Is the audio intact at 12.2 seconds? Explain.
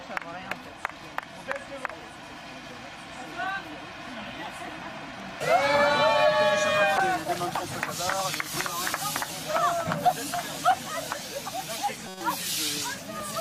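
No. At 12.2 seconds the audio sits inside a corrupt frame decoded, running from about 12.08 to 12.21 s across a few consecutive compressed frames. Flipped bits in those frames were decoded anyway, so misread gains and codes put energy at the wrong frequencies, heard as a brief chirpy burst peaking near about -20 dBFS. Unlike a dropout or concealed lost frame, it adds spurious new content rather than going quiet or repeating.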